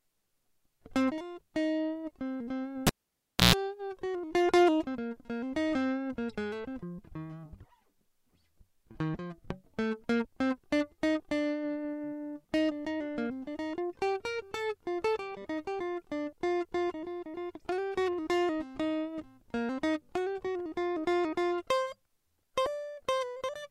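Cable pulled and plugged in, from 2.87 to 3.55 s: the music drops out with a pop as a live lead is yanked from its socket, leaving near silence for about 0.63 s. As the plug goes back in, the tip makes contact before the sleeve grounds, so an ungrounded 60 Hz mains buzz bleeds through for roughly 0.13 s. A second pop follows as the connection seats fully and the music returns.

Repeated buffer at 22.66 s: the playback device ran short of fresh audio and replayed its last block instead of waiting. The 2.67 ms segment, which fits a 128-sample buffer, plays two extra times in a row with a hard edge at each join. Because each copy is so short, the stutter registers as a brief click or buzz rather than an audible repeat, and about 5 ms of the music is lost.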